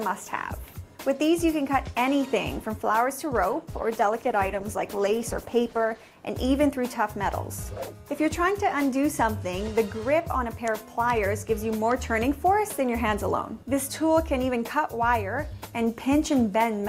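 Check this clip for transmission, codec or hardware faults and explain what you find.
One transmission fault is present. From 3.53 to 6.23 s a call bitrate drop makes the audio rough and dull, consistent with the encoder falling from about 64 to 14 kbps, coding coarsely and shedding high frequencies for about 2.6 s.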